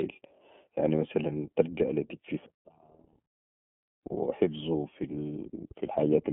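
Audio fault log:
throughout iLBC codec: the speech passes through a narrowband VoIP codec that codes each 30 ms frame's excitation independently of the last, so the voice sounds plainly rough and slightly synthetic, with a grainy texture that fits the 13.33 kbps mode. The line band runs 150 Hz to 3.4 kHz. On a spectrogram, energy stops at a hard ceiling near 3.7 kHz with nothing above, and the lowest band under 150 Hz is thin.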